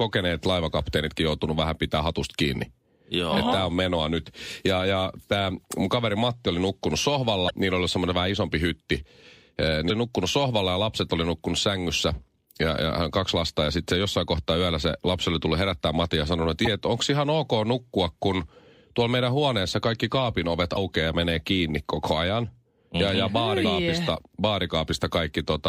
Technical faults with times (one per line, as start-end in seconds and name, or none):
7.46-7.51 damaged data in a compressed stream
9.86-9.91 damaged data in a compressed stream
16.63-16.67 damaged data in a compressed stream
20.73-20.77 damaged data in a compressed stream
23.63 damaged data in a compressed stream